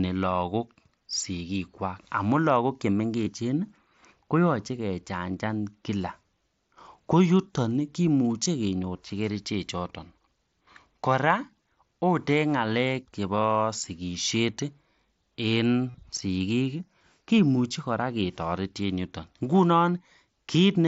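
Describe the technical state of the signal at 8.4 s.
Right around 8.44 s there's a tiny bit of concealed Bluetooth headset packet loss: about 15 ms of audio never made it from headset to phone, which fits a couple of dropped frames. The receiver covered the gap by repeating the best-matching piece of the waveform just before it, so you get a very brief buzzy patch and a slight warble as real audio resumes, all underneath the mSBC headset codec's usual 8 kHz ceiling.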